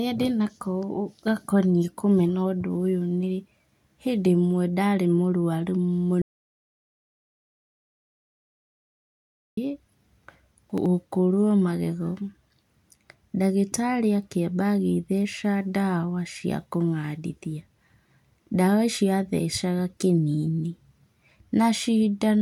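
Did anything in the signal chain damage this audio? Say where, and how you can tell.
Yes. There is an audio dropout to silence from 6.22 s to 9.57 s, just after "ndarĩ mũrũaru". The speech stops mid-flow and returns abruptly. The gap lasts about 3.4 s. It is plain silence, with no room tone or noise floor underneath. That points upstream of the recorder. The input feed was likely lost at the device or link while the encoder kept writing silence. Whatever was said in that stretch is gone.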